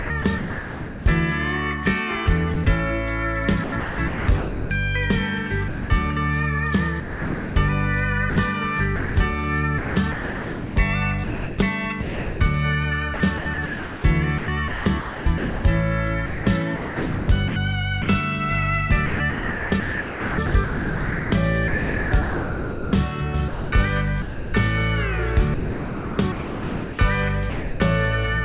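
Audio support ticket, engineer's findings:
Sound chopped by the voice detector at 0.00–1.06 s, 2.54–2.66 s, 3.64–4.70 s, 7.0–18.08 s, 19.06–24.54 s and 25.54–27.8 s. Audio repeatedly swapped for synthetic comfort noise. About 4.6 s lost in the 7.0–18.08 s stretch alone. Likely sender VAD toggling on quiet passages.

Sound dropped by the voice detector at 5.68–5.90 s. The audio gives way to steady noise for 220 ms, then resumes when the detector re-triggers. Likely the sender VAD classed quiet sound as background. Band-limited, nothing above 4 kHz, which fits the G.711 mu-law call path.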